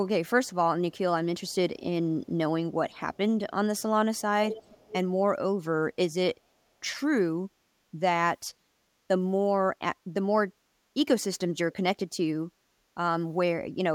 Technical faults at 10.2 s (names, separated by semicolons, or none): none